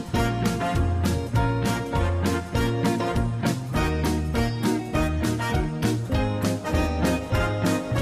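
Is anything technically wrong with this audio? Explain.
No, nothing is technically wrong with this audio.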